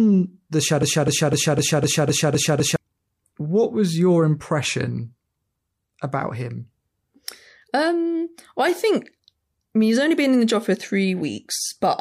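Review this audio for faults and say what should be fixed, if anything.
Broken-record loop from 0.83 to 2.76 s: a 0.25 s fragment of speech repeats exactly, back to back, eight times, and the speech that belonged in that span is gone. The player, encoder or stream likely stalled and kept resending its last buffered fragment. To prevent it, detect stalls in the playback or streaming chain and output silence or resynchronise rather than repeating stale buffer contents.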